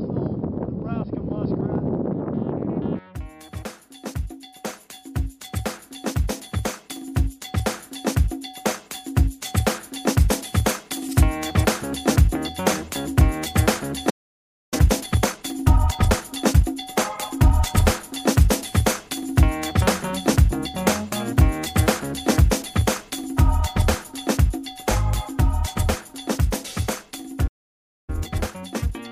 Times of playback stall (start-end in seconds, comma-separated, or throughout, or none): 14.09-14.74, 27.47-28.10